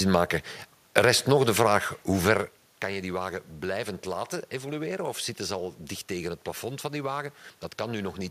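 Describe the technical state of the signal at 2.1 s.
At 2.1 s the signal is intact, with no dropout, clipping or other system fault, only the background noise of the room the speech was recorded in.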